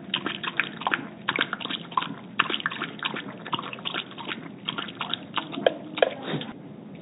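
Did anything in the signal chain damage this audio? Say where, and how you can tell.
No, nothing in the chain hurt these sounds. They came over an ordinary call path using G.711 mu-law at 64 kbps, so the top end stops at 4 kHz, which is simply that narrowband link doing its normal job.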